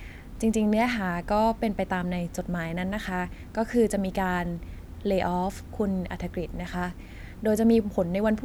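Speech recording with no technical faults to report.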